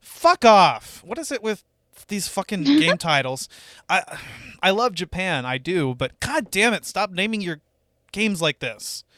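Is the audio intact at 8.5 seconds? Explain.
Yes, at 8.5 seconds the speech plays through cleanly, with no dropout, click, distortion or other fault to be heard at that point.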